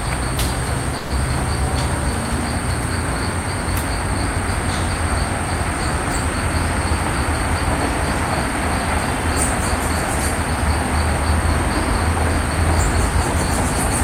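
At 0.97 s the sound stalls for about 0.15 s, a call audio freeze: the last sound is stretched into a fading buzz or hiss, likely from held-up packets draining the jitter buffer. Unlike a dropout, nothing is lost; playback resumes where it stopped, about 130 ms late.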